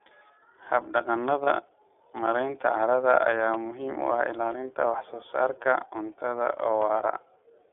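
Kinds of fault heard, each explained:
iLBC codec: the whole clip runs through this narrowband VoIP codec, in 30 ms frames at a rate that fits 13.33 kbps, band-limited to 300–3600 Hz, so the speech sounds plainly rough and synthetic.
Lost iLBC frames: one 30 ms frame drops out around 1.43 s, and the decoder fills it with a repeated pitch cycle, giving a brief buzzy held sound before recovering almost immediately.
Block of digital silence: at 3.54 s, right after "carrada ayaa", and again at 4.52 s, 5 ms of audio cuts out with hard edges, each heard as a tick or dip.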